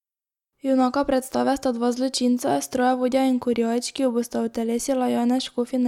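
No technical faults are audible anywhere in the speech recording.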